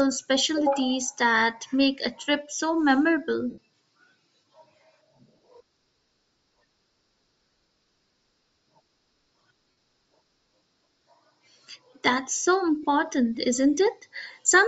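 Throughout, the speech has a breathy, grainy upper edge, likely from Bluetooth LC3 compression at a low bitrate, with missing treble refilled by noise rather than simply dulled. At 3.50 to 3.58 s, 9.71 to 9.75 s and 12.83 s come lost LE Audio frames: the decoder repeats the last spectrum with scrambled phase, smearing the sound into noise instead of clicking.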